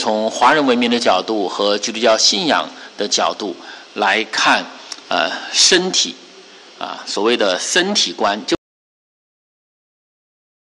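An audio dropout to silence begins at 8.55 s and runs to the end of the clip, about 2.1 s in all. The sound cuts off mid-flow into silence with no room tone, likely because the input was lost while recording continued.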